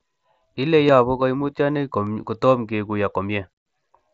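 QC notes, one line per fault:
0.88 s and 2.06 s, concealed Bluetooth headset packet loss: each is a barely noticeable smear, with a gap of about 7.5 ms that fits a single lost frame. The receiver patched the gap by repeating a closely matching stretch of the preceding mSBC-coded waveform.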